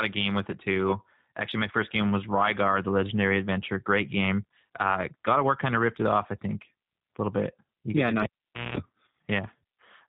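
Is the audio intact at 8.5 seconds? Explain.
No. Right after "bit yeah agree no", a cable is pulled and plugged in from 8.23 to 8.77 s. A pop leads into about 0.49 s of near silence, then 0.2 s of 60 Hz mains buzz while only the tip touches, then another pop. The waveform shows spikes around a flat gap, and the spectrogram shows a 60 Hz harmonic ladder. The G.729 codec also applies here, rebuilding the sound at 8 kbit/s with a rough, synthetic edge and a spectrogram that stays empty above 4 kHz.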